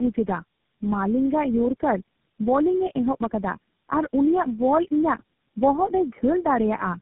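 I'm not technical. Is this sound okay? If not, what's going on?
No. Throughout the speech, the voice sounds rough, muffled and warbly, as if heard through several phones one after another, and nothing above about 3.8 kHz comes through, so it lacks crispness. This is tandem speech coding: the call passed through four phone-network speech compressors in a row, and each one decoded and re-squeezed the already damaged result of the one before, so the flaws piled up.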